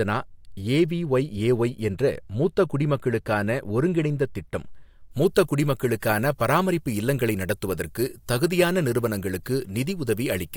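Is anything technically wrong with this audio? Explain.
Yes. From 5.11 s to the end, after "மூத்த குடிமக்களுக்கான ஒருங்கிணைந்த திட்டம்", pre-emphasis is left on. The treble boost fits an FM 75 µs curve, and the matching de-emphasis cut was never applied. The highs sit about 13 dB up at 10 kHz, so the speech turns thin, bright and hissy on sibilants.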